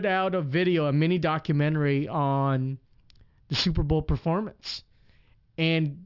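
Aliasing runs through the whole clip. The speech appears to have been resampled down, which fits a drop to 12 kHz, with no low-pass filter first. Energy above 6 kHz folds back below it. Sibilants turn gritty and metallic, with the false tones roughly 20 dB under the speech.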